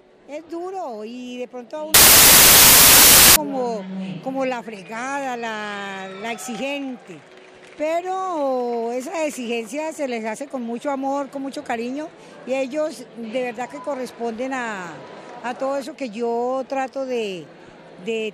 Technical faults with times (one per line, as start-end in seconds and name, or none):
1.94-3.36 samples built from the wrong bytes